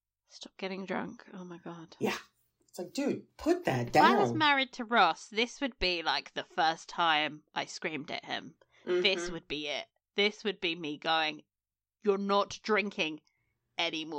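Speech recording with no technical faults detected anywhere in the clip.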